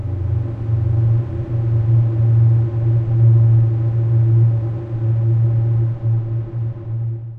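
From 0.43 s to 6.58 s, faint, evenly spaced ticks appear roughly every one and a half seconds, around seven in all. These are clock slip clicks. The likely cause is two devices running on separate, unsynchronised clocks that differ by something like 15 ppm. Each time that drift builds up to a full sample, a single sample is dropped or repeated, leaving a tiny discontinuity that sounds like a tick.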